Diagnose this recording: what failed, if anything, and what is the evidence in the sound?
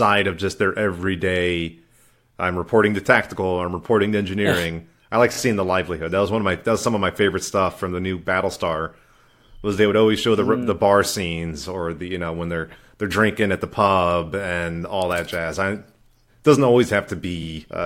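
Repeated frames at the codec or storage stage. At 5.32 s the speech stutters: one compressed block of 26.1 ms plays three times in a row, running to 5.37 s and adding 52.2 ms to the audio. A block that length points to MP3-style frames of 1152 samples at 44.1 kHz. Unlike a buffer underrun or packet loss, there is no gap or faded concealment. The identical fragment simply recurs, which means the same frame data was decoded again.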